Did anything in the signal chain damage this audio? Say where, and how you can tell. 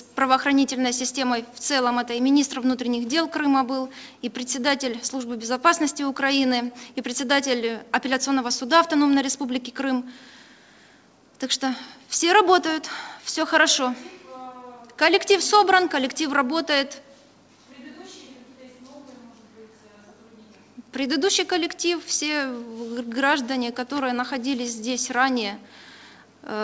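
No, nothing in the chain damaged it; the call path sounds as a wideband codec of the G.722 kind should, with the band ending at 8 kHz and nothing above it.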